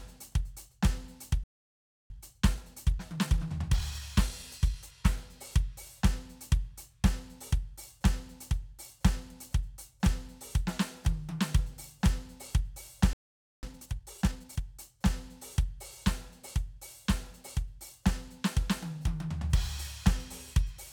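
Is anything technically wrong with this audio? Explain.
Yes. The music has two playback stalls, each followed by time-compressed catch-up.

The first playback stall runs from 1.44 to 2.10 s, a silence of about 0.66 s. The second runs from 13.13 to 13.63 s, about 0.5 s. In both, the music cuts out mid-phrase and then resumes. The likely cause is the player running short of buffered data, or its output thread being held up, so nothing reached the output until it recovered.

Time-compressed catch-up follows each stall. From 2.10 to 5.10 s the music plays at 1.15 times normal speed. From 13.63 to 14.61 s it plays at 1.5 times. The player works off its backlog by dropping short slices and cross-fading across the gaps. Pitch stays where it should be. The passage sounds hurried.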